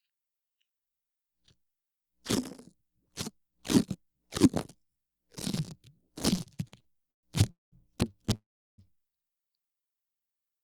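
From 6.35 s to 7.25 s the everyday sound breaks into repeated stalls, a stutter. It stops and restarts ten times. The longest hold lasts 130 ms. Together the holds fill about 335 ms, roughly a third of that stretch. Packets kept reaching the receiver late, so its jitter buffer kept running dry. Each time it stretched the last sound until data came. Nothing is lost. The sound simply drags and jerks forward.

A call audio freeze follows at 7.51 s and lasts until 7.74 s. The sound halts for 210 ms. Only a brief tail of held sound is heard before about 180 ms of silence. A second freeze runs from 8.35 s to 8.80 s. This one lasts 433 ms, with about 370 ms of it silent. In both cases the sound resumes exactly where it stopped. The likely cause is packets held up in transit, which starved the jitter buffer and pushed the stream later by the length of each gap.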